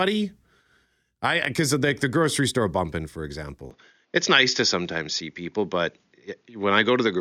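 At 3.71 s the speech abruptly loses everything above 6.9 kHz without any gap, and a modest level shift and a faint new background noise continue to the end. This is likely an input switched to a poorer device. The new noise and level, beyond just lost treble, set it apart from simple filtering.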